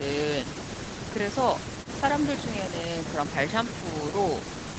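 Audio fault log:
No faults turn up anywhere in this speech, and the way the top end stops at around 8 kHz is just what you'd expect from a wideband call codec, so that's normal call behaviour rather than a problem.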